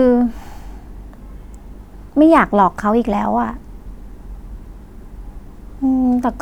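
A speech recording with one sharp click at 2.37 s, most likely dropped samples: a handful of samples, well under a millisecond, are missing, so the waveform jumps abruptly.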